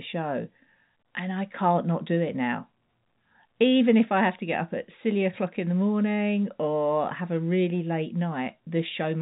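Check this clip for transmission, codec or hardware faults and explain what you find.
No faults are present in this telephone-band speech.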